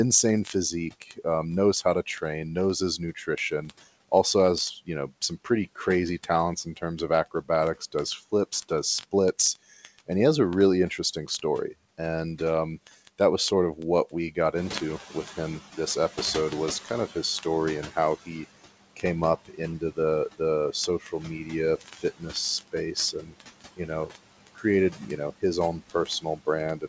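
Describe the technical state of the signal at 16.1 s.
Word clock ticks run from 0.11 s to the end: an unlocked receiving clock, off by roughly 1000 ppm, drops or repeats one sample about every 20 ms, producing a rattle or buzz.

Noise suppressor artifacts are present throughout: about 16 dB of frame-by-frame band reduction makes the remaining noise sink and rise with the speech.

Speech cut by the noise suppressor spans 13.76 to 16.18 s: parts of the speech were treated as noise and lowered by up to about 10 dB, so they sound swallowed.

Noise suppressor catching up runs from 14.55 to 18.17 s: the room noise rose about 11 dB near 14.5 s, and the lagging estimate lets it through before adapting toward about 12 dB of reduction over 3.62 s.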